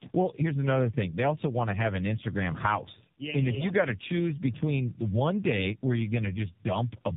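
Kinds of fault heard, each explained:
Tandem speech coding: the speech passed through two low-rate speech coders in succession, the second re-encoding the first one's already degraded output, so the errors compound. It sounds rougher and more warbly than a single coder would, and nothing is audible above 3.7 kHz.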